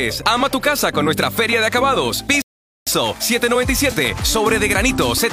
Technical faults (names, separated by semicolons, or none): rebuffering stall